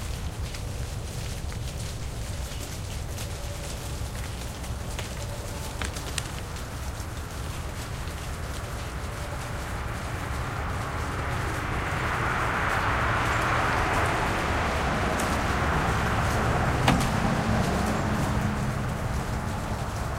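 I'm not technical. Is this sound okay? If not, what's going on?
Yes, it sounds fine; nothing stood out as a problem when listening to it.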